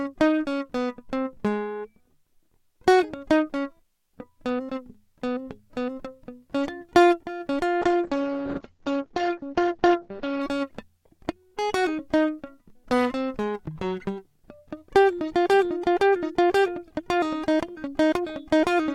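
At 7.83 s the music hits a call bitrate drop that lasts until about 10.47 s. The connection's bandwidth estimate fell, so the encoder got starved of bits and started coding much more coarsely, which sounds like a fall from roughly 128 kbps to something near 9 kbps. Highs get chopped, with the top end collapsing from 20 kHz down to 8 kHz. For about 2.6 s it's muffled and watery before it clears again.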